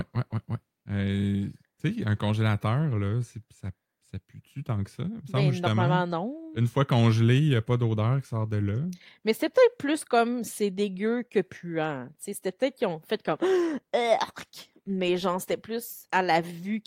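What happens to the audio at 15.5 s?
Nothing goes wrong at 15.5 s; the speech carries on intact through that moment.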